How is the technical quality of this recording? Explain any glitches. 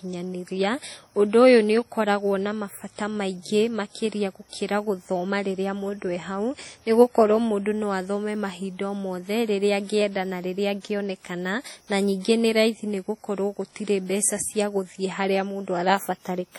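The recording is heavily degraded throughout. The speech rings and sounds washy, with hiss breathing alongside it and nothing above 18.5 kHz. This is likely WMA compression at a low rate, consistent with 32 kbps, whose long transform blocks smear quantisation noise.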